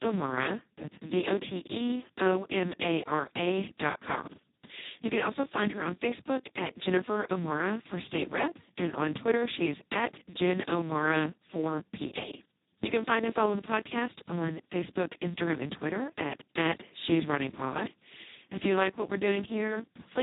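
From start to finish the speech has been squeezed through the Speex codec at its lowest quality setting, which fits a bitrate near 2 kbps. The excitation gets almost no bits, so the sound is hoarse, buzzy and near-robotic, with nothing above 3.8 kHz.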